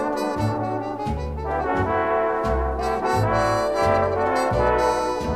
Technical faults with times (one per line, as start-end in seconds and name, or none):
none